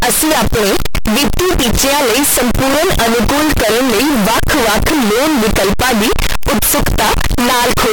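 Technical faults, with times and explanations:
throughout: float read as integer. The speech is very loud, harsh and squared-off, with noise as loud as the voice, likely from 32-bit float samples decoded as 32-bit integers.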